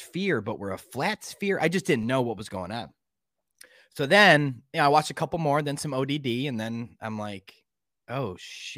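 At 2.03 s, right after "flat sphere I just" and before "know what was going", there's a DC step: the waveform's zero line suddenly shifts by about -38 dBFS. You hear it as a low thump, and the offset then bleeds away through a 20 Hz high-pass while the speech carries on unaffected.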